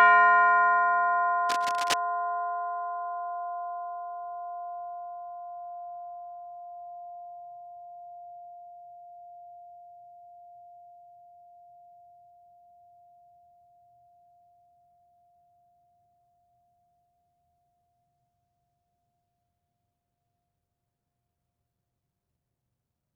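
From 1.49 to 1.98 s, a burst of cable scratch noise cuts across the music. It sounds like rough, uneven scratching, only a little quieter than the music itself. The likely cause is a worn cable or connector moved mid-signal, its contact flickering rapidly.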